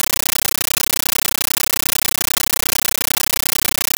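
Throughout, a compressed stream is played as audio: undecoded data, consistent with 640 kbps AC-3, replaces the speech with loud 13.3 ms static bursts 31.25 times a second.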